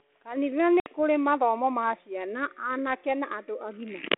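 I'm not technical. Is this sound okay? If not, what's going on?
No, there's one glitch. At about 0.8 s the speech drops out completely for around 60 ms, roughly seven small chunks of the call lost in transit. That's packet loss on an ADPCM call. The phone codec, G.726 ADPCM, works by predicting each sample from the ones before it. When audio goes missing, the receiving end's guesses drift out of step with the sender's. Right at 0.89 s, as "mathomo ma ciana anake" comes back in, the speech is briefly slightly rough before it settles.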